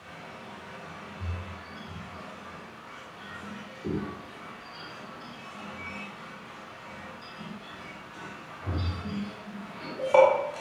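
No technical faults can be heard anywhere in the recording. There is nothing here that calls for a timestamp or an explanation.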